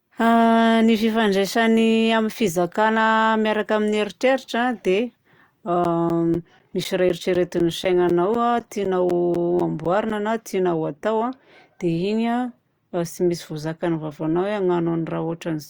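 A speech recording with periodic USB or driver dropouts from 5.84 s to 10.11 s. Every 0.25 s, a slice of roughly 10 ms drops out to silence, about twenty times in all, heard as a steady ticking under the talking. Something is stalling the USB bus or audio driver on a fixed cycle. On the waveform these show as evenly spaced notches of near-silence. A spectrogram shows thin vertical gaps with clicky broadband edges.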